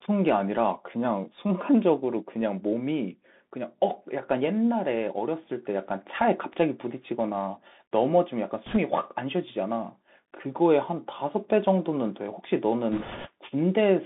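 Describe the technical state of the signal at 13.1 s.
A rushing, crackly noise covers the speech from 12.92 to 13.28 s. These are bit errors on a Bluetooth voice link, with a few percent of bits flipped. Each bit carries only a small step, so the damage comes through as noise rather than loud clicks. Underneath, the sound is thin, with a granular hiss and scratchy s sounds, confined to roughly 200 Hz to 3.6 kHz. This is the Bluetooth CVSD headset codec, whose adaptive one-bit steps lag behind fast, bright sounds.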